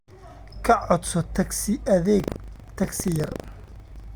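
From 2.16 s to 4.1 s the speech carries buffer tearing. The writer and the hardware reader of the ring buffer have drifted out of step and now cross inside every period, so a small slice of each buffer, well under a tenth, plays audio from about 150 ms earlier, with hard joins at both edges. The result is a steady robotic rattle at 25 Hz, which points to a 40 ms buffer period, riding on the speech wherever signal is present.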